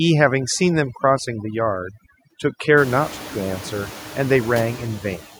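Overdone noise removal runs throughout the speech. The reduction is set so hard that any frequency band sitting near its noise estimate is pulled almost to nothing, taking the quieter parts of the voice with it and leaving a lowered, twinkling background.

Noise suppressor artifacts are also present from start to finish. Bands judged to be steady noise are cut by 12 dB frame by frame, so the residue dips between phrases and swells beneath them. This is most obvious after the room noise rises around 3 s, by about 25 dB, to sit only about 16 dB below the speech.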